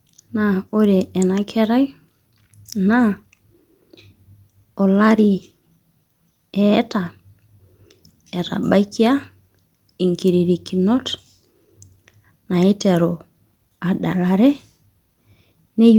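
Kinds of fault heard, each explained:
The signal holds steady throughout, with no dropouts, distortion, added noise or timing disturbances to be heard.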